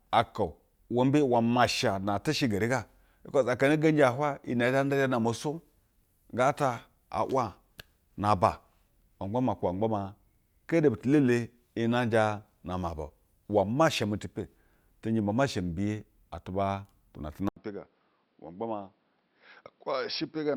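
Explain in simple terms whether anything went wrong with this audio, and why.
At 17.49 s the speech turns duller and quieter after a brief gap, with new background noise. That gap and noise point to the input likely being switched to a poorer device, not just muffled.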